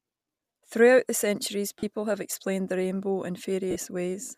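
Bluetooth LE Audio frames were lost at 1.79 to 1.83 s and again at 3.71 to 3.76 s, gaps of about 37.5 and 45 ms that fit runs of 7.5 ms frames. The decoder repeats the last spectrum with scrambled phase, so the speech briefly turns to a noisy, fading smear.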